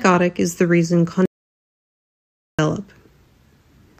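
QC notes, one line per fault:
1.26–2.59 s, audio dropout to silence: immediately after "is the reason" the speech cuts off mid-flow and the signal falls to silence, with no room tone or noise floor underneath, for about 1.33 s before the speech resumes abruptly. A total absence of signal like this most likely means the input was lost while the recorder kept writing silence. Whatever was said in that stretch is unrecoverable.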